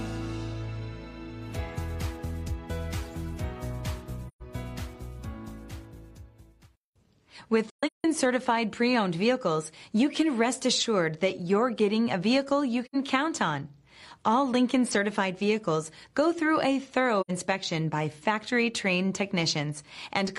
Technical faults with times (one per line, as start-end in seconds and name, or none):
4.28-4.42 AAC frame loss with muting
7.70-8.04 AAC frame loss with muting
12.85-12.95 AAC frame loss with muting
17.21-17.31 AAC frame loss with muting